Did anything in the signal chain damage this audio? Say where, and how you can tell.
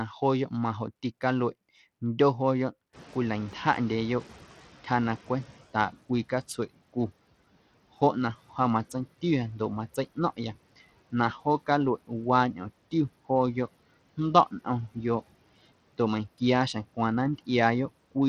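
Yes. The codec stage has damaged the whole clip. Across all of the speech, the top end is thin and unsteady. High frequencies flicker in and out, and a gritty, grainy noise sits on every syllable. This is likely Bluetooth SBC compression. SBC splits the signal into a few wide sub-bands and shares out bits without any hearing model. The damage is plainly audible here, which fits a starved bitrate of around 80 kbps. The weak upper bands get almost nothing, and the rest are coarsely quantised.

The call processing stage has a noise suppressor catching up between 2.93 and 5.63 s. The room noise jumps by about 20 dB at around 3 s. It then sits roughly 22 dB below the speech. That rise is genuine background, not a fault. The problem is the suppressor's response. Its noise estimate lags, so the new noise first comes through with less reduction. Over about 2.7 s it sinks by about 13 dB as the estimate adapts.

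The driver or buffer stage has an underrun with held sample at 16.93 s. The output buffer ran dry for 0.73 ms, and the converter held its last value. The waveform goes flat for that instant. Essentially no live audio was lost, so playback resumes where it stopped. That is why there is no sharp click, only a tiny, soft discontinuity.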